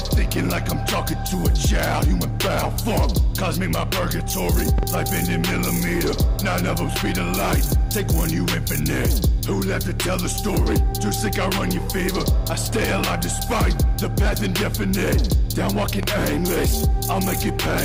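A loud pop, a quick double at 4.78–4.85 s and a single at 16.03–16.06 s, peaks well above the sound, likely from a switching or static voltage spike.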